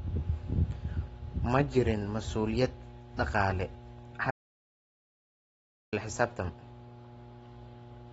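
A steady mains hum runs under the whole recording: a fixed low tone at 60 Hz, sitting roughly 20 dB below the speech. It comes from the power line leaking into the signal, through a ground loop or a nearby transformer. It stays locked at one pitch and level whether anyone is talking or not, which sets it apart from rumble or handling noise. Those wander in level and spread across a broad low band rather than forming a single tone.

Also present throughout is a band limit: nothing reaches above about 7.6 kHz. Together with a plainly audible smeared, warbling texture on sustained sounds and sibilants, this likely comes from AAC compression. The cut-off and damage fit AAC-LC at a low bitrate, around 24 kbps, where the encoder drops high bands and quantises what remains coarsely. A simple low-pass filter would dull the top end in the same way but would leave no such fizz or swirl.

From 4.31 s to 5.92 s the audio drops out to silence for about 1.6 s. 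Everything, including any room tone, vanishes into silence before the sound resumes mid-flow. That total emptiness points to an audio dropout to silence, likely a lost input or link while recording continued. A gate or heavy noise reduction would leave residue or ramp the level down rather than cutting cleanly to nothing.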